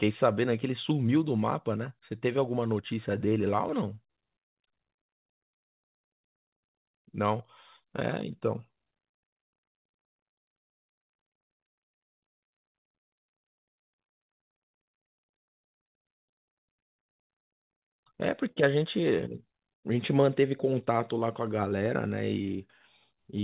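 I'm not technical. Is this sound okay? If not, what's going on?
No, it isn't quite right. This is a speech recording from a phone-style call, which already sounds a bit narrow because nothing above about 4 kHz comes through, and on top of that there are three timing problems.

First, there's clock drift between sender and receiver. The sending device's clock runs a few percent slow compared with the receiving one, so audio keeps arriving a little behind schedule and the receiver is always short of material to play.

That leads to repeated timing corrections from about 0.05 s to 23.34 s. To cover the gaps, the receiver keeps repeating tiny slivers of audio. Altogether it adds roughly three quarters of a second, so the speech plays at about 97% speed, with a slightly sluggish, uneven rhythm and occasional small hiccups.

Finally, there's a short stall from a late packet at 18.51 to 18.58 s. 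One chunk of audio showed up late, so the receiver held the previous sound for 49 ms until it arrived. Nothing is lost, but that moment sounds briefly drawn out or buzzy.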